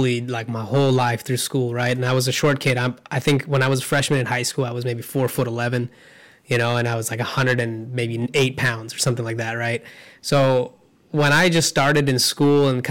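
Hard clipping runs through the whole speech clip. Overdriven by about 11 dB, with about 3 percent of samples cut flat, it adds harsh fuzz on loud syllables.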